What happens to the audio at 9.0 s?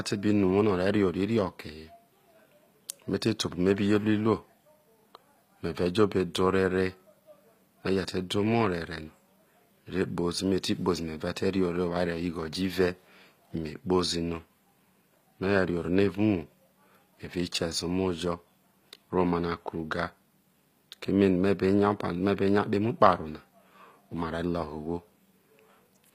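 At 9.0 s the speech carries the same HE-AAC compression damage heard throughout, likely from a low-bitrate encode around 24 kbps that coded only the lower spectrum and synthesised the treble by copying bands upward. Nothing is present above 15.5 kHz, and s sounds come across gritty and metallic.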